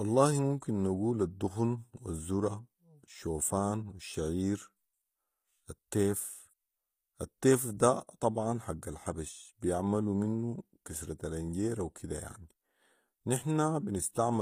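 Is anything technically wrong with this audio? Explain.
Yes. Throughout the speech, the treble sounds bright but synthetic, and nothing reaches above about 15.4 kHz. The likely cause is HE-AAC compression at a low bitrate, consistent with roughly 24 kbps. The codec keeps only the lower spectrum and rebuilds the top by copying lower bands upward under a coarse envelope, so the upper harmonics no longer line up with the lower ones. S sounds come out gritty and metallic. A plain low-pass or band-limited codec would instead leave the top dull and missing.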